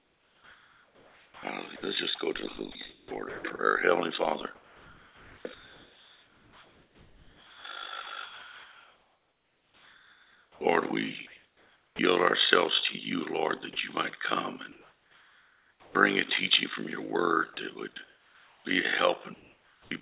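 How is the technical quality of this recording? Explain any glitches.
The recording has several clear glitches: a constant fluttering ripple, plus repeated dropouts where synthetic noise replaces the real sound. The band stops at 4 kHz, which points to a narrowband telephone codec such as G.711.

The overlap-add ripple runs through the whole clip. The audio was split into windowed frames and rejoined with an overlap that does not add up to a steady gain. The level swings by about 11 dB roughly 50 times a second, giving a rough, robotic tremolo.

From 0.00 to 3.59 s, 4.55 to 11.99 s and 17.54 to 19.91 s, the sound is chopped, likely by the sender's voice detector repeatedly switching transmission off and on. About 1.9 s, 6.1 s and 1.2 s of those stretches are filled with comfort noise. The result is choppy.

Between 14.72 and 15.95 s, comfort noise stands in place of the background, likely because transmission paused and the receiver generated filler. 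For about 1.2 s the real ambience becomes a flat, featureless hiss, about 8 dB quieter than before.

At 15.82 to 15.95 s, the onset is clipped by the voice detector, which was likely slow to notice the sound returning. The first 130 ms were never sent, so the sound bursts in abruptly without its soft beginning.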